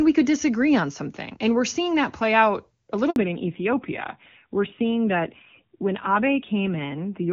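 A speech recording carried over a phone call, where a network handover left a gap: no frames arrived from 3.10 to 3.16 s, so after "that play out a" the audio drops out for 60 ms. After the handover the call suffered a fallback to narrowband, from wideband HD Voice to a low-rate narrowband codec. From 3.16 s to the end nothing above 4 kHz remains, leaving the sound duller and rougher than the clear wideband opening, whose quality points to AMR-WB at a high rate.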